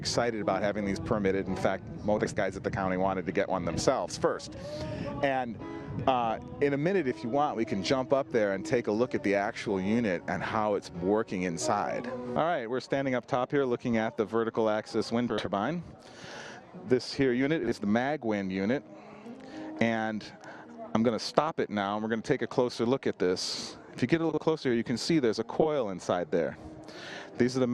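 The audio has frames out of order five times, at 2.18–2.38, 15.29–15.48, 17.64–17.72, 24.29–24.39 and 25.61–25.66 s. Adjacent blocks of about 80, 40 or 20 ms play swapped, giving a garbled flutter. Spectrograms show abrupt vertical seams where the content jumps.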